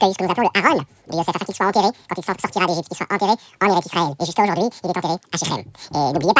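From start to finish the speech runs at double speed and sits a full octave high, giving the hurried, chipmunk-like quality of a wrong sample rate. The samples are being played back twice as fast as they were captured, with no rate conversion, so tempo and pitch rise together by the same factor of 2.0, or 12 semitones. That ratio fits audio recorded at 8 kHz but played at 16 kHz.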